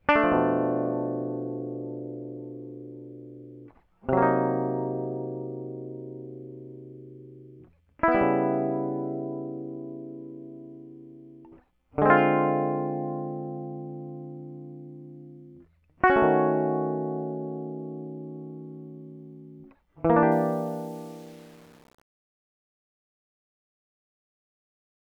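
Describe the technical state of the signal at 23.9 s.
At 23.9 s the music is deep inside a fade-out that suffers from truncation distortion on a fade. The fault runs from 20.32 s to the end at 25.16 s. The fade stage keeps too few bits and adds no dither, which fits an 8-bit word. As the level drops, the waveform collapses into coarse square steps. By 23.9 s the tail sounds gritty.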